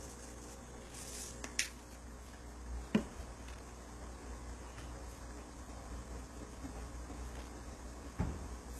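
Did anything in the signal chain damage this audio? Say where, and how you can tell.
Yes. In the analogue wiring, a loose connector crackle appears as irregular scratchy bursts at 0.76 to 1.29 s, 3.48 to 3.60 s and 7.36 to 7.48 s. A contact breaking intermittently causes this, unlike steady, evenly spaced digital clicks.

At the codec stage, the sound is cut off above 12.3 kHz throughout, with gritty, metallic treble. This points to HE-AAC compression, likely at a very low bitrate around 16 kbps, since its replicated high band differs from plain low-pass dullness.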